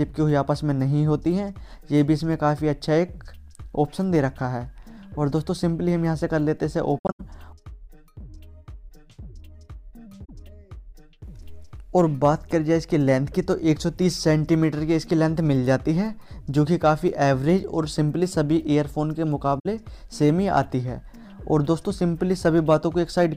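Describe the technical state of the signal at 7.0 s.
At 7.0 s you're right in an AAC frame loss with muting, running from about 6.98 to 7.21 s. The decoder got no data for a handful of frames and filled their spectrum with zeros. About 171 ms of sound is gone, scattered over 213 ms, which points to something like eight missing frames. The longest gap is around a tenth of a second. The overlapping windows fade the audio out and back in, so the dropouts sound like soft-edged holes.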